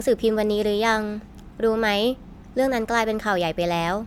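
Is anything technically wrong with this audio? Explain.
Yes. Throughout the speech, generation loss, likely from about five MP3 passes at 128 kbit/s, stacks quantisation noise, giving swirly, hollow sound, smeared attacks, and spectrogram holes below a 19.9 kHz ceiling.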